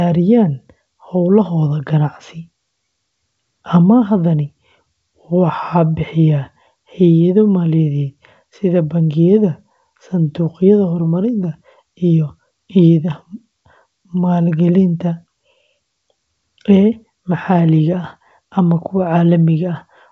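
No technical faults can be heard in this speech.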